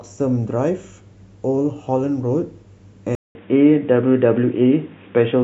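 At 3.15 s the speech drops out for about 200 ms, then returns dull and boxy, with nothing above 3.7 kHz, a level shift of a few decibels and a faint new background noise. The likely cause is the input switching to a poorer device.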